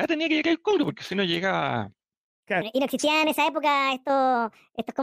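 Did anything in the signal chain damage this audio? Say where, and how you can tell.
Yes. A section at the wrong speed runs from 2.62 s to the end of the clip. From that point the speech suddenly plays about 1.44 times too fast. Pitch jumps with it, by about seven semitones, so the voice turns high and hurried. Speed and pitch shift together, at one instant. That points to playback or editing against the wrong clock. The likely cause is a sample-rate mismatch when that section was stitched in or replayed.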